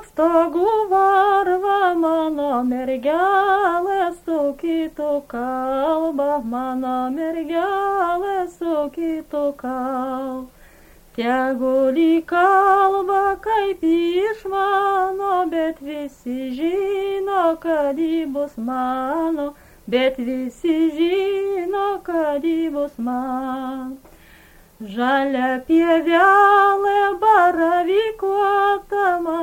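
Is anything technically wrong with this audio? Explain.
No, nothing is technically wrong with this audio.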